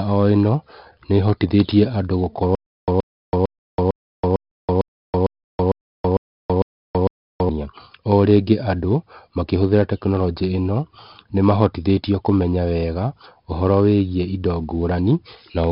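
A speech recording with a gritty hiss riding on every louder passage, harsh edges on sharp onsets, and a dull top with nothing above 5.3 kHz. That is heavy 4-bit ADPCM compression: each sample is coded as a coarse step from a prediction, so the error rises and falls with the signal, and the band limit points to a low sample rate of roughly 11 kHz, consistent with about 44 kbps. Right after "ĩno nĩhotithetie andũ", from 2.55 s to 7.49 s, the same 125 ms fragment returns 11 times at a steady 452 ms pace, each separated by about 328 ms of dead digital silence. This is stutter with silent gaps, likely from a player or stream stalling, replaying its last buffered fragment at each retry and then running empty, so the audio belonging to that stretch is lost.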